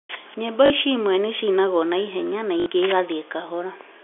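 At 0.66 to 0.70 s and again at 2.60 to 2.66 s, packet loss with the last packet repeated briefly replaces the speech with a replayed fragment lasting 40 ms and then 60 ms. The lengths fit two and three lost 20 ms packets. Each stretch buzzes at about 50 Hz, heard as a short robotic stutter. On a waveform the same short block tiles side by side. A spectrogram shows frozen, comb-like bands, all capped at the 3.4 kHz telephone band.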